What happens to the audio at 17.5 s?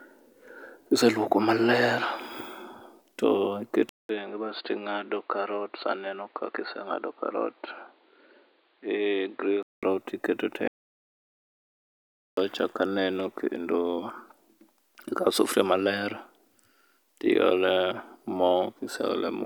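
Nothing goes wrong at 17.5 s; the speech carries on intact there, with no dropout, click or distortion at that moment.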